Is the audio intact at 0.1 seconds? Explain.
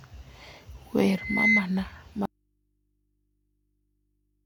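Yes, at 0.1 s the speech plays through cleanly, with no dropout, click, distortion or other audible fault at that moment.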